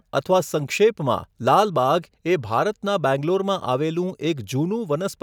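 Nothing stood out as a technical fault anywhere in this speech recording on listening.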